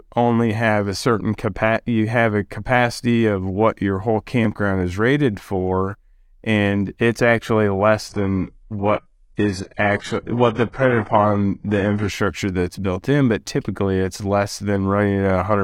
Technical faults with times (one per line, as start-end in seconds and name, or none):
8.09-12.09 adaptive stream at a lower bitrate